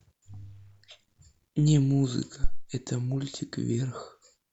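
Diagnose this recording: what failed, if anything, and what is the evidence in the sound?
A phantom power thump at 2.44 s, dying away by about 2.69 s, points to the analogue input stage. It is a deep, low-frequency thud laid over the speech, peaking at about -11 dBFS and decaying with a time constant of roughly 56 ms. Supply voltage was switched on or off while the input was live, and that sudden DC step passed through the coupling capacitors into the preamp, where it was heard as a single bassy knock.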